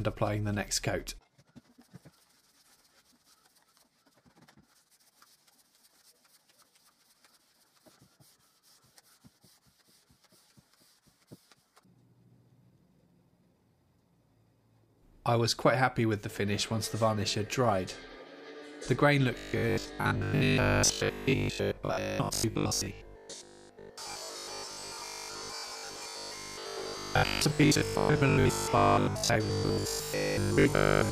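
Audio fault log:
19.38–31.11 s, robotic sound from repeated short buffers: the sound turns into a rigid, metallic buzz locked at 50 Hz, still loosely tracking the underlying audio to the end. The likely cause is audio arriving too seldom, so playback fills the gaps by looping the most recent slice, about 20 ms long to match that 50 Hz pitch, while the real material in between is skipped. Most of this stretch is repeated rather than new audio.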